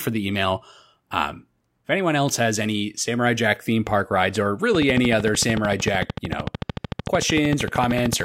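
Likely electrical interference or a faulty connection or power supply injects a train of clicks from 4.75 s to 8.21 s, just after "theme park rides or". Around fifty near-identical pulses arrive at a regular 13.3 per second, peaking about 15 dB above the speech, heard as steady ticking.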